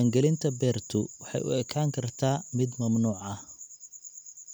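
No technical faults can be heard anywhere in this speech recording. Nothing in the audio points to a problem in how it was captured, processed or passed along.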